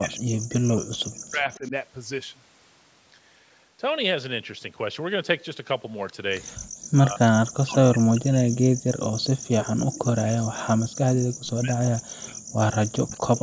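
Right from the start, 0 to 1.73 s, the speech keeps dipping and breaking up, dropping by something like 40 dB at its worst. That's most likely speech suppressed in double talk: with both ends talking at once, the echo canceller couldn't tell this talker apart from the loudspeaker echo, so it ducked everything. It comes back at 6.91 to 7.23 s, then for most of 7.42 to 12.76 s, where it chews up around five seconds of sound, and again from 13.01 s to the end.

Overlapping the tail of that first stretch, 1.53 to 1.7 s, there's a faint delayed copy of the voice, about 25 dB down and trailing by 222 ms. That's likely an echo leak: the far end is on a loudspeaker, and its canceller let some of what its microphone picked up slip back down the line. The same ghost shows up briefly again at 13.13 to 13.17 s, with the same 222 ms lag, short and scrappy.

At 6.58 to 6.63 s the room sound just drops out for about 50 ms, falling by about 40 dB, then snaps back. 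That's background gated by the echo canceller: while the loudspeaker was playing, the canceller clamped the microphone down hard and released it a moment later. With nothing above 8 kHz, the call's microphone processing shows through as a capped top end.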